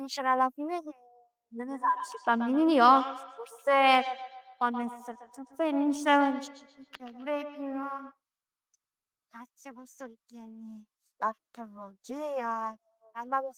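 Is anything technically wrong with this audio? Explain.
Yes. From about 1.6 s to 8.2 s the speech has feedback echo between two devices. A second device in the same room replays this microphone's audio, the microphone picks it up again, and neither echo canceller removes sound played by the other device. Each syllable returns roughly every 150 ms as a thinner, ringing copy, the loudest about 12 dB below the direct speech, giving a fluttering, metallic trail.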